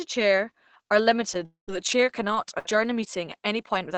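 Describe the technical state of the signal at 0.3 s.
At 0.3 s the speech comes through intact, with only the band-limited character of a normally working WebRTC call path, its highs stopping at around 8 kHz.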